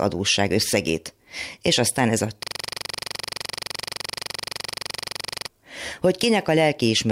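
A system hang loop runs from 2.43 s to 5.48 s in this speech clip. The computer or its audio driver stopped supplying new data while the sound hardware kept replaying whatever sat in its ring buffer. A 42.67 ms slice of sound repeats exactly, roughly seventy times, at 23.4 Hz. That rate is low enough to come across as a rapid, rattling machine-gun stutter rather than a smooth buzz, and the loop length fits a 2048-sample buffer.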